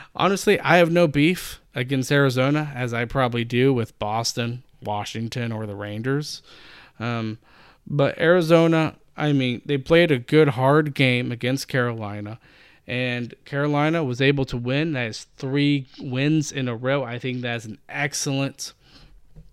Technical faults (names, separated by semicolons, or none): channel delay (comb filtering)